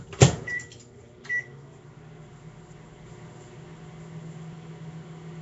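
Throughout, the sound carries a rough, hissy, watery smear, likely from Nellymoser compression around 32 kbps. The spectrogram shows noise-filled patches in weak bands and nothing above 7.7 kHz.

At 4.53 s, audio likely goes missing between chunks: roughly a fifth of a second vanishes, and the waveform jumps abruptly where the two sides are spliced together.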